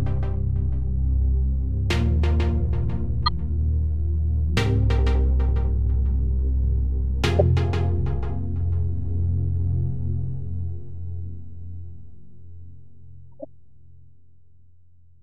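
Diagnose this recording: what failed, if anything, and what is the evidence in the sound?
The codec stage failed: corrupt frames were decoded. Brief bursts appear at 3.26–3.33 s, 7.39–7.41 s (loudest, near -5 dBFS) and 13.40–13.45 s (faint). Damaged bits misplaced spectral energy across a few frames each. Unlike clicks, each burst lasts about the length of its damaged frames.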